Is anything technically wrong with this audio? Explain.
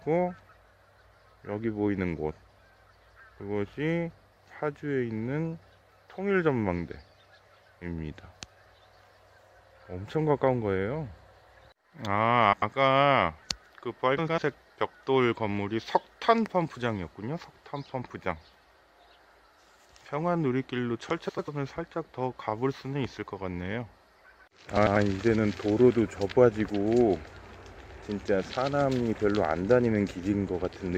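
Yes, there are two kinds of fault.

Frames out of order occurs four times, at 12.52 to 12.73 s, 14.18 to 14.38 s, 21.28 to 21.49 s and 24.76 to 24.97 s. Each time, two neighbouring blocks of about 96 ms, which fits runs of four frames, are decoded in swapped order. The sound jumps ahead and then back, producing a brief garbled flutter. No time is lost. On a spectrogram, the patterns inside each 0.2 s window appear exchanged, with abrupt vertical edges at the seams.

A loud pop occurs at 16.46 s and lasts about 20 ms. A single sharp pulse sits on top of the audio, peaking about 5 dB above the signal, and the sound continues underneath it. The likely cause is a voltage step or spike, such as static or a switching transient, entering the chain and being shaped by the circuits after it. On the waveform it shows as an isolated tall spike. On a spectrogram it appears as a thin broadband vertical stripe.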